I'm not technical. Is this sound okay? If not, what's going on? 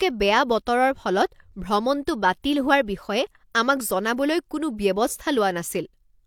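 Yes, this one sounds fine, and there's nothing wrong with the recording that I can hear.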